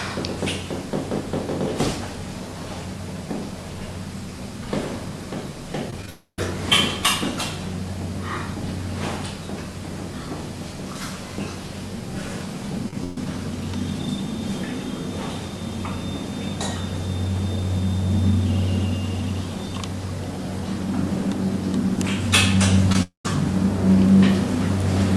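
Short concealed packet loss occurs three times in quick succession, at 5.90 to 5.93 s, at 6.02 s and at 6.06 to 6.08 s. Each loses about 10 ms of audio, and the receiver covers it by extending the preceding sound. The result is a brief smear or wobble rather than an audible gap. These losses lead straight into a long network dropout from 6.09 to 6.39 s. The patched sound does not blend back in this time. It fades, and then about 90 ms of silence follows before the audio resumes further along, with roughly 0.29 s never heard. Silence arriving after a fading fill is what marks this as a long dropout rather than a short loss.

From 12.89 to 13.17 s, repeated packet loss gives a choppy, robotic stretch. There are four separate gaps, the longest 127 ms, and about 55% of the span is patched. Unlike a single dropout, the sound here breaks up over and over instead of going silent once.

A further short concealed packet loss at 22.92 to 22.95 s loses about 20 ms and is heard as a quick smear. 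It comes just before a second long network dropout from 23.02 to 23.25 s. There the filled sound fades and about 130 ms of silence follows before the audio returns. About 0.22 s is gone, most likely because a run of packets failed to arrive in time.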